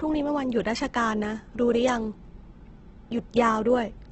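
Throughout the speech, the sound is grainy and rough, with noisy tones and nothing above about 8.3 kHz. This is likely heavy Opus compression in its CELT music mode, filling starved bands with folded or noise content, which fits a low bitrate around 12 kbps.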